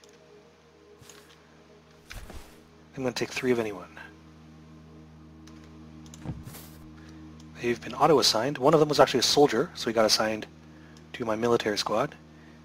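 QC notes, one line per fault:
6.43–6.46 s and 9.01 s: compressed frames skipped. Each time about one 20 ms frame never plays, so the sound jumps ahead. On a spectrogram this shows as a thin vertical line at the join, and the waveform shows a short seam.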